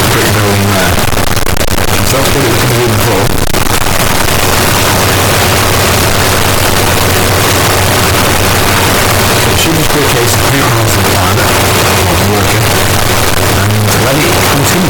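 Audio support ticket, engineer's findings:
Float read as integer, whole clip. Sound's slammed to a near-square wave at an almost fixed high level, super loud and harsh, noise floor as loud as everything else. Likely 32-bit float samples being read as 32-bit integer somewhere in the import or decode path.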